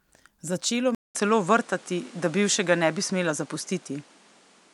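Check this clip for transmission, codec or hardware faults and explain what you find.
One fault here. From 0.95 s to the end, input switched to a poorer device, likely: a 200 ms gap, then duller speech cut off above 11.2 kHz, a level shift of roughly 5 dB, and new background noise.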